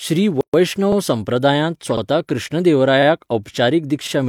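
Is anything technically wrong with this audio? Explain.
Yes, this speech clip has two kinds of fault.

First, a gap at a join of encoded pieces runs from 0.41 to 0.54 s, about 127 ms of silence. Two separately encoded segments were joined without trimming the encoder's start-up delay and end-of-stream padding. The speech stops dead, then resumes where it left off. The waveform shows a flat stretch with abrupt, slightly smeared edges, and the spectrogram shows a vertical blank band cutting across all frequencies.

Second, overlapping chunks appear at 0.92, 1.97, 3.02 and 4.07 s. The audio was handled in 1.0 s chunks, each beginning 50 ms before the previous one ended, so that 50 ms of sound plays twice at every join. This produces a brief stutter or click on a steady one-second rhythm. On the waveform, a short segment visibly repeats at each boundary. On the spectrogram, a thin slice of the pattern is duplicated, with a discontinuity line at each of these four points.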